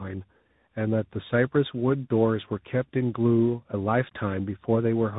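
Throughout, the speech sounds rough, muffled and warbly, with nothing above 3.8 kHz. This is tandem speech coding: AMR-NB output was re-encoded through G.711 into CVSD.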